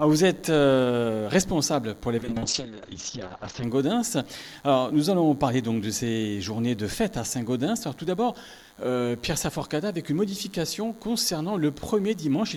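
Right from the start there's a thin, steady buzz sitting under everything. That's DECT cordless phone buzz: a nearby DECT handset or base fires a radio burst every 10 ms, and the audio circuitry rectifies it into a 100 Hz tone stacked with harmonics. It's fairly low, roughly 35 dB under the signal, but it never lets up.

Then at 2.19 s there's a call bitrate drop. The bandwidth estimate collapsed and the encoder got squeezed hard. The sound points to a fall from something like 128 kbps down to around 10 kbps. The top end gets chopped from about 20 kHz to 8 kHz, so it suddenly goes muffled and a bit rough and watery. It sits at its worst for about 1.44 s before clearing up at 3.69 s.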